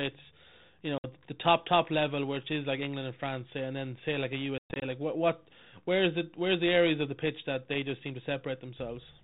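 Packet loss on an ADPCM call: packets dropped at 0.98 to 1.06 s (60 ms) and, scattered over 4.58 to 4.83 s, 160 ms lost with a 120 ms longest gap. Each dropout is a hard-edged silence. The decoder's predictor and step size lose step with the sender, so speech resumes with brief, slight distortion.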